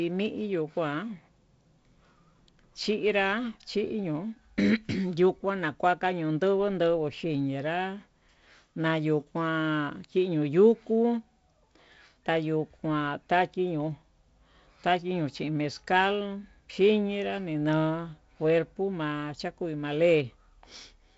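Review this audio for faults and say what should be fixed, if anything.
Nothing stood out on listening, so there is nothing here that needs fixing.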